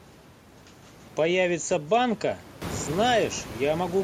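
No technical faults can be heard in this speech.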